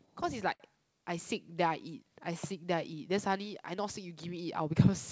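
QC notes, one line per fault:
Throughout: clock drift between sender and receiver. The sender's clock runs about 4 percent slow against the receiver's, so the jitter buffer keeps draining. The receiver has to pad the stream to keep up. Small timing hiccups recur at uneven intervals across the clip.
0.54 to 0.62 s: short stall from a late packet. A packet arrived late and the jitter buffer ran dry. The last sound was stretched for 61 ms until it came. Nothing is lost, but the sound hangs on too long, with a slight buzz or dip.
1.54 to 4.92 s: repeated timing corrections. The receiver keeps repeating short pieces to match the slower sender, running at 96 percent speed. Roughly 150 ms is added over this stretch. The edits are small and unevenly spaced, heard, if at all, as slight hiccups or an unsteady pace. The G.722 call codec passes nothing above 8 kHz.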